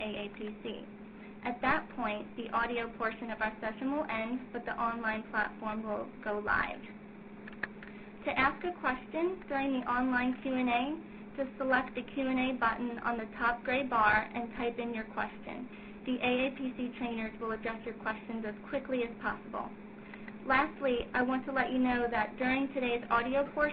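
Nothing technical stands out here; the audio holds steady all the way, with no dropouts, glitches or distortion to point to.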